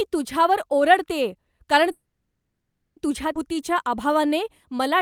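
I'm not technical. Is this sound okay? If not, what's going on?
No, it has three problems.

Call audio freeze, 1.91 to 2.98 s: right after "तुझ्यावर ओरडतेय कारण" the sound stops for just over a second, nearly all of it silence. It's likely that the call data got held up in transit. When it resumes, it picks up exactly where it stopped, so nothing is lost; it just arrives late.

Skip ahead, 3.34 to 3.37 s: here the opposite happens. Roughly 0.7 seconds of audio is thrown away, and the two sides are stitched together almost seamlessly. You hear a sudden jump forward with part of what was said missing.

Jitter buffer slow-down, 3.48 to 4.98 s: for the last stretch the receiver repeats tiny slices of the sound to rebuild its reserve. That adds 120 ms to the audio over these 1.5 seconds, so it plays at about 92% speed at the same pitch and sounds a bit drawn out.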